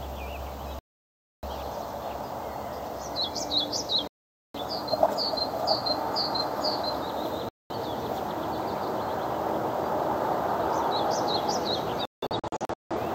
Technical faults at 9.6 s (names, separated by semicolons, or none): none